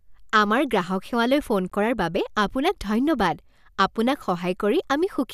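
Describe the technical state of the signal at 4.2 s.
At 4.2 s the speech signal is intact, with no audible fault at that moment.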